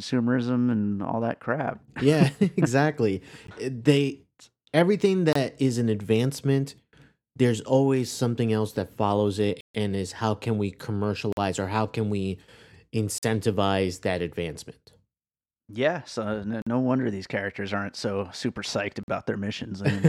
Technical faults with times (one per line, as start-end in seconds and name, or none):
3.47 block of digital silence
5.33-5.35 block of digital silence
9.61-9.75 block of digital silence
11.32-11.37 block of digital silence
13.18-13.23 block of digital silence
16.62-16.67 block of digital silence
19.03-19.08 block of digital silence